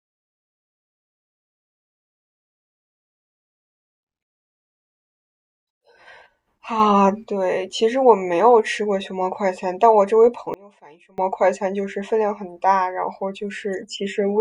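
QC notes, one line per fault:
6.80–7.24 s, sudden gain jump: the level steps up by about 6 dB with no fade-in, and the background noise rises right along with the speech, then drops back at 7.24 s. Likely a gain setting applied instantly rather than ramped.
10.54–11.18 s, sudden gain jump: this one goes the other way, a hard drop of about 24 dB that takes speech and noise floor down together, so it nearly vanishes before snapping back at 11.18 s.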